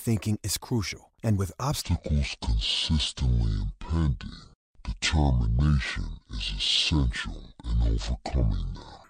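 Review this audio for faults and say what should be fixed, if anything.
From 1.82 s, right after "crucial and with", to 9.04 s, the speech plays as a section at the wrong speed. It runs at 0.566 times normal speed, so everything is drawn out and heavy. Pitch falls with speed, by roughly ten semitones. The voice turns deep and sluggish. The likely cause is a clock mismatch in playback or editing, stretching the audio without correction. Prevention: confirm the sample rate matches at every stage of editing and playback.

At 5.59 s there is DAB burbling. It is a brief burst over the speech. Weak reception let bit errors slip through error correction into the MP2 data. The error rate is low, under a tenth of a percent. The sound points to a handful of damaged frames. Corrupted samples put short noise blips in single sub-bands, and corrupted scale factors make sub-bands jump in level. Prevention: improve reception with a better antenna or a stronger multiplex before recording.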